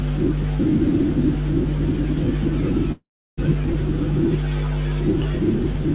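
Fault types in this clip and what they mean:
Call audio freeze: from 2.92 to 3.39 s the sound stalls for about 0.45 s. The last bit stretches into a fading buzz, then roughly 0.33 s of silence, and it resumes from where it stopped. Packets were likely held up, draining the jitter buffer.
Skip ahead: around 3.74 s playback jumps forward. Roughly a tenth of a second of audio is gone, and the two sides are butted together with almost no gap, so the sound lurches. A chunk got thrown away while later audio was already queued.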